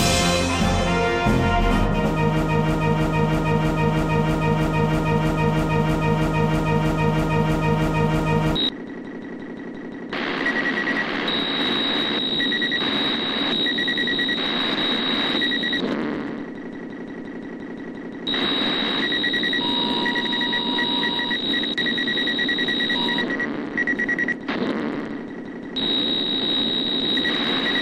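From 2.42 s to 8.56 s a broken-record loop repeats one 0.32 s fragment exactly, 19 times back to back, and the audio due then is lost, likely from a stall resending its last fragment. Spectrogram and waveform show identical blocks tiled every 0.32 s.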